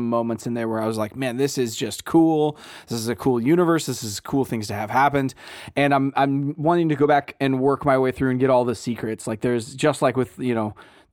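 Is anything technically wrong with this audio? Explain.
Yes. From 0.81 to 5.76 s, pre-emphasis is left on: the CD 50/15 µs treble lift was never de-emphasised, leaving about 8 dB extra at 10 kHz, so the speech sounds thin and sibilant, with a fixed shelf rather than an arbitrary EQ boost.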